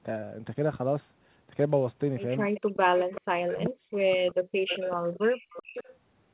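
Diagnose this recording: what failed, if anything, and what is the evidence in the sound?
The call-processing stage at the far end likely let loudspeaker sound slip past its echo canceller, a classic echo leak. A delayed copy of the speech, trailing the original by 384 ms, appears from 2.54 to 3.21 s at about 15 dB below the direct speech, then again from 4.68 to 5.93 s, louder at about 10 dB down. The fixed lag points to a single acoustic path from loudspeaker back into the microphone that the adaptive filter never fully modelled.

Speech suppressed in double talk follows from the same canceller, which likely could not tell the local talker from the returning echo while both were active and pulled the whole microphone signal down. Between 2.75 and 4.68 s the speech dips and breaks up in pieces, totalling roughly a second, with the deepest drops reaching around 40 dB. The suppression overlaps the first echo burst, so the system attenuated real speech along with the leak.

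Background gated by the echo canceller shows up from 5.37 to 5.74 s. During the second echo burst the suppressor clamped the microphone hard, and the room tone falls by about 22 dB for roughly a fifth of a second in total before recovering. The gating sits inside the call-processing stage, ahead of the G.711 A-law codec, whose narrowband path caps everything at 4 kHz.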